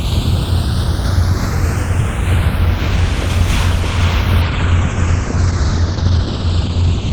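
A clip of everyday sounds with two problems. Throughout, the channels are drifting apart: the two sides run on separate clocks, off by something like 70 parts per million, so the gap between them creeps to a fraction of a millisecond. In mono that slowly sweeps comb notches through the sound, giving a slow flanging. Then from 4.42 s to the end there's a call bitrate drop. The top end cuts off at 8 kHz instead of running to 20 kHz, and the texture turns coarse and watery, which fits the encoder falling from roughly 32 kbps to around 11 kbps and never recovering.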